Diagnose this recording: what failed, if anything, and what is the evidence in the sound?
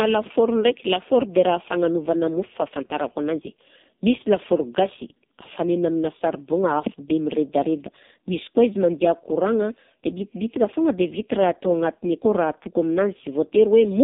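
The codec stage failed: an AMR narrowband mobile codec runs throughout, with nothing above 3.8 kHz and a heavily buzzy, synthetic speech texture pointing to one of its lowest modes, near 5 kbps. A plain telephone band-limit would sound muffled but natural; here the sparse pulse-driven vocal-tract model itself audibly degrades.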